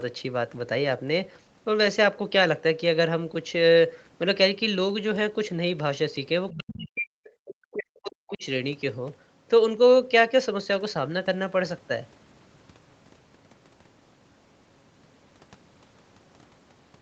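At 6.5 s, a brief scrap of a second voice leaks through, about 20 dB below the speech. This is the other side's voice leaking through. It likely comes from loudspeaker echo the canceller did not fully remove.

From 6.54 to 7.15 s the speech dips sharply, by as much as about 40 dB. This is speech suppressed in double talk. Both sides likely spoke at once, and the canceller turned everything down. The voice fades and breaks into pieces. A second echo scrap sneaks in at 6.72 to 6.76 s.

The same suppression returns from 7.4 to 8.44 s, about a second of choppy, hollowed-out speech. Inside it, at 8.29 to 8.36 s, another faint echo fragment surfaces, about 25 dB down. Throughout, the call path's Opus coding keeps everything below 8 kHz.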